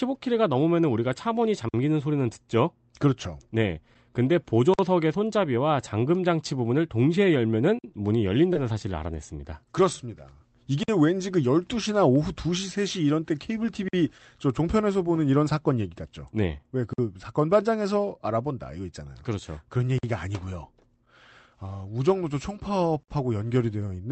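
Speech that came through an Opus call path, with the top end rolled off around 8 kHz, and it's broken up by a regular gap between chunks: a 50 ms hole at 1.69, 4.74, 7.79, 10.83, 13.88, 16.93, 19.98 and 23.03 s. That's one after every 3 s of audio, so the audio was handled in 3-second chunks and something, probably codec padding or a player starting each chunk late, drops silence at every join. Nothing is lost, but the flow gets chopped at each seam. Separately, there's a short concealed packet loss at about 8.53 to 8.57 s. Roughly 20 ms of audio didn't reach the decoder in time, and the receiver patched the hole by extending the preceding sound before fading back into the real signal. You hear it as a quick smear or wobble rather than a clean dropout, and a brief sound can get swallowed there.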